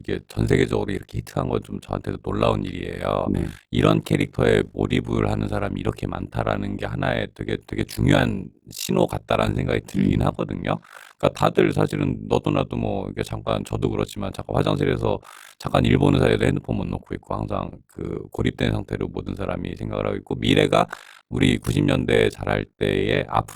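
Throughout, frames were rejoined with an overlap that misses constant gain; this overlap-add ripple pumps the speech about 60 dB, near 50 Hz, a robotic flutter.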